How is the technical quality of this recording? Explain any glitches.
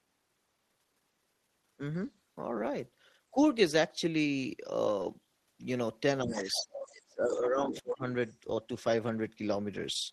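The recording has two audible problems, both centred on the stretch where two people talk over each other.

Speech suppressed in double talk: the voice dips slightly at 3.32–3.37 s, then drops deeply from 6.24 to 8.04 s. The likely cause is an echo canceller ducking both voices during overlap. These are dips, not clean silences.

Other side's voice leaking through: scraps of a second voice appear at 6.35–6.89, 7.29–7.39, 7.74–7.81 and 8.26–8.35 s, well below the main voice and faint at the end. This is likely residual loudspeaker echo.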